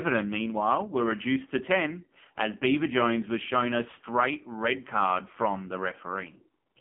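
AMR narrowband mobile codec damage runs through the whole speech clip: the sound is confined to a telephone band of roughly 150 Hz to 3.4 kHz, and heavy buzzy, synthetic coloration suggests a low mode around 5.9 kbps, with the speech rebuilt from a coarse vocal-tract model and sparse pulses.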